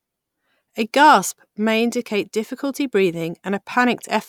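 A short bit of speech, and there's nothing technically wrong with it that a listener would catch.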